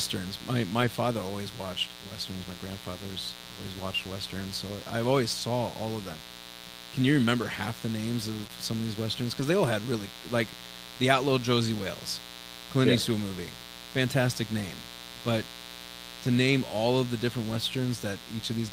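A steady, raspy mains buzz runs throughout, roughly 15 dB below the speech. Switching spikes twice in every 60 Hz mains cycle add harmonics that appear on a spectrogram as evenly spaced horizontal lines reaching several kilohertz.

Lost packets rebuilt from error correction occur at 0.81–0.83 s, just before "father always watched westerns"; at 5.39 s; at 7.37–7.43 s, just before "half the names"; at 8.43–8.45 s, just after "half the names"; at 9.40–9.42 s; and at 17.50–17.56 s. Each rebuilt stretch lasts 20 or 40 ms and plays from a low-bitrate copy, so it sounds briefly rough and noisy.

A short concealed packet loss follows at 8.47–8.51 s. About 15 ms is synthesised from the preceding sound, heard as a tiny smear, with a smoothed, repetitive patch in the waveform.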